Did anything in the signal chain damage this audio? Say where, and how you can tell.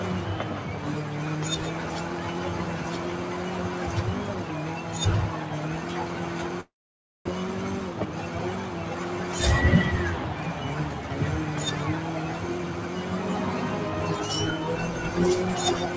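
Yes. Noise suppressor applied to music or sounds, throughout, in call processing: a speech-tuned suppressor treats sustained sound and tails as noise, pulling the level down about 5 dB, so held parts pump.

Long network dropout, 6.61 to 7.29 s, likely a network loss: the receiver fills about 0.67 s, a fading continuation then about 0.54 s of silence, and the sound resumes with material missing.

Jitter buffer speed-up, 7.90 to 8.13 s: the buffer trims short pitch-period pieces to cut excess delay, so the sound runs at about 114% speed without a pitch change and sounds hurried. The G.722 call path, with nothing above 8 kHz, is not a fault.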